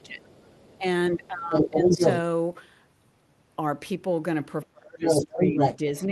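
Speech suppressed in double talk runs from 0.00 to 2.01 s, with the talker's level dipping by up to about 15 dB across roughly a second and a half. This likely happened because the echo canceller, facing both sides at once, turned everything down. Within that stretch, the other side's voice leaking through appears faintly at 0.26 to 0.49 s, about 30 dB under the speech. It returns much louder from 1.55 to 2.14 s, about 5 dB above the talker, probably as loudspeaker echo the canceller failed to remove. The suppression comes back from 4.63 s to the end, now dropping the speech by as much as about 25 dB. From 5.04 s on, the leaked voice again sits about 5 dB over it, all heard through the Opus call path's 12 kHz band limit.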